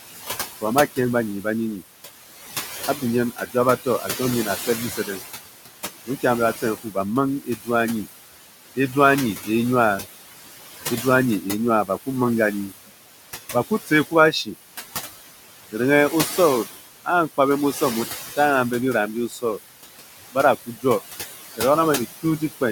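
Speech with room noise sitting about 9 dB below the voice carries noise suppressor artifacts throughout: the background is pushed down about 15 dB between words and swells back under them, which sets it apart from a steady noise floor. Speech cut by the noise suppressor occurs at 0.61–1.82 s, 2.97–10.04 s, 11.02–14.48 s, 15.72–18.38 s and 19.29–22.62 s, the last right after "bira mbi". In these stretches, soft consonants and word endings sink by up to about 17 dB and sound swallowed rather than abruptly chopped, with roughly a second of sound affected in the 2.97–10.04 s stretch.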